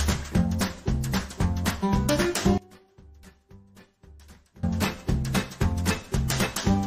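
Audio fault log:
2.58–4.63 s, one channel inverted: the sound drops by about 26 dB to a faint leftover copy, likely from one stereo channel's polarity flipping so shared content cancels in the mono sum. The waveform shows an abrupt amplitude collapse.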